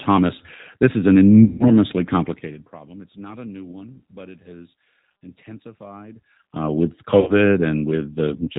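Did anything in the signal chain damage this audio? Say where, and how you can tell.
Yes. At the codec stage, the whole clip carries plainly audible G.729 codec damage. The speech sounds rough and slightly synthetic, as if rebuilt from a vocal tract filter and sparse pulses rather than carried as a waveform, which fits G.729A at 8 kbit/s. A spectrogram would show energy stopping hard at 4 kHz, with nothing above it, and harmonics that look smeared and grainy instead of cleanly striated.

There is also VoIP packet loss concealed by the speech codec, at the network stage, in two places. The first runs from 1.44 to 1.71 s, just after "is an", with about 160 ms of audio missing. The second runs from 7.20 to 7.33 s, with about 70 ms missing. In each gap the decoder repeats its last pitch and filter at falling gain, so the sound stretches into a fading, extrapolated tail. On a spectrogram this looks like flat, repeated bands decaying across the gap. 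The waveform shows a shrinking envelope, and the sound stays weak briefly after each gap ends.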